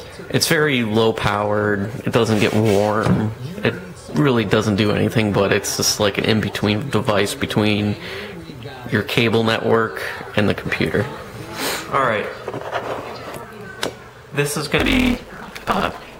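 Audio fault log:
14.78 to 16.19 s, block size mismatch (truncated): for the last stretch of the clip, one stage writes blocks longer than the next stage takes in, so the tail of every block is discarded. The regular cuts produce a buzz at 172 Hz, which fits a 256-sample read, and because material is skipped each cycle the audio runs about 1.88 times faster than it should. The timbre stays intact even as the sound hurries.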